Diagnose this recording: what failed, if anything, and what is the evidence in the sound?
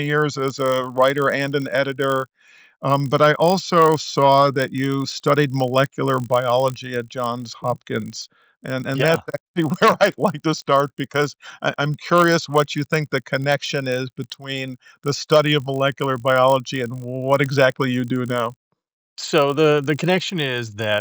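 A steady 50 Hz buzz rides under the sound for the whole clip and is present only while there is signal. This points to the resampler restarted on every block, likely upsampling from 16 kHz to 48 kHz. Each 20 ms block was converted in isolation, so its edges carried a small error, repeating fifty times a second.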